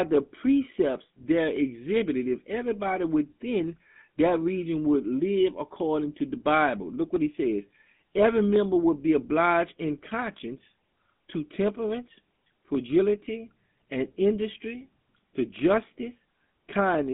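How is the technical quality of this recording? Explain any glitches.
The recording is narrowband and audibly coded for its whole length.

GSM full-rate codec, throughout: the speech passes through a vocal-tract model driven by regularly spaced pulses, which fits a 13 kbps stream. Content sits roughly within 200 Hz to 3.5 kHz, nothing above 3.8 kHz survives, and a buzzy, gravelly roughness is plainly audible.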